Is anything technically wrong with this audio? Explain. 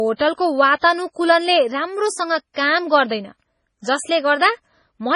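Yes. The speech is heavily damaged throughout, with nothing above 10.5 kHz and a watery, swirling texture, likely MP3 compression at a low bitrate around 24 kbps, rather than a simple low-pass filter.

Pre-echo is audible at 0.79 to 0.83 s and 2.54 to 2.56 s. A short hiss smears in just before each attack because quantisation noise spreads across the transform block. Unlike a click, it is spread evenly ahead of the sound.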